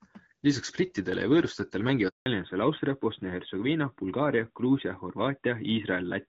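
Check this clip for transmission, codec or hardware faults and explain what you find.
Two faults stand out, both tied to a network handover partway through the speech.

Handover gap, 2.08 to 2.26 s: while the call was being passed from one network to another, no speech frames got through for about 180 ms. The speech fades out within a few tens of milliseconds, then there is dead silence until the new link begins delivering audio. Whatever was said during that stretch is simply gone.

Fallback to narrowband, from 2.26 s to the end: after the switch, the call no longer runs over HD Voice. Before the gap, the clear, light-damage wideband sound fits AMR-WB at around 12.65 kbit/s. Afterwards the audio is cut off at 4 kHz, which points to an older narrowband codec such as AMR-NB. The airy upper range disappears, and the speech sounds duller, boxier and rougher.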